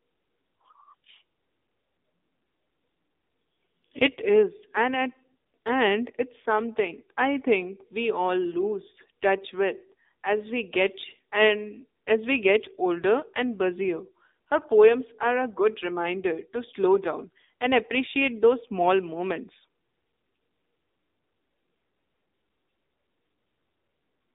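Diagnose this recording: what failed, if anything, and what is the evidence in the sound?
The whole clip went through an AMR narrowband mobile codec at the codec stage. The speech sits in a 250 Hz to 3.7 kHz band, and it sounds plainly buzzy and synthetic, which fits a low AMR-NB mode around 7.4 kbps driving its vocal-tract model with sparse pulses.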